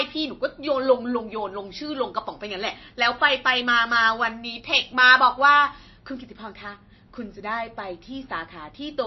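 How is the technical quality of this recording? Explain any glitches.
The quality is poor: the speech carries plainly audible compression damage from start to finish. There is nothing above 5.8 kHz, and the band below sounds watery and swirly, with metallic chirps on s sounds and smeared consonant attacks. The likely cause is MP3 compression at a low bitrate, roughly 25 to 30 kbps, where the encoder drops the treble at a fixed cut-off and zeroes weak frequency lines that flicker from frame to frame.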